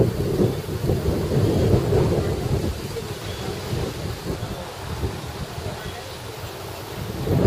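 Nothing goes wrong anywhere in this audio, so there's no fault to point to at any moment.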